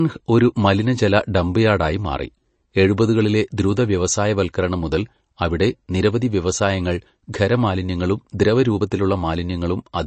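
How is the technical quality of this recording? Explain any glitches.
The recording is marred by plainly audible compression damage that runs through the whole clip. A brief smear of noise also appears at one attack.

MP3 compression is audible throughout. Nothing sounds above about 8.3 kHz, so the speech is dull and muffled. Weak detail flickers in and out, giving a watery, swirly texture. This is likely a low-bitrate MP3 encode, around 32 kbps.

Pre-echo occurs at 3.57 s, just after "ഡംപ് യാർഡായി മാറി എഴുപതുകളിലെ". A sharp onset fell late in a coding block. The noise meant for the loud part spread about 10 ms ahead of it, so a short hiss precedes the attack and blurs it.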